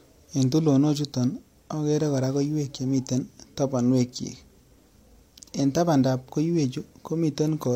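Nothing stood out as a technical problem on listening to this speech recording.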